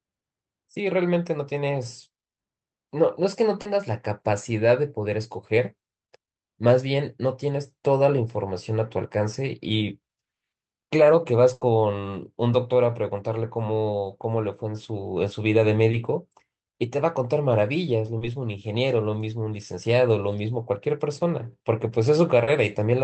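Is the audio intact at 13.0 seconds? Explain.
Yes, the audio is intact at 13.0 seconds, with no fault at that moment.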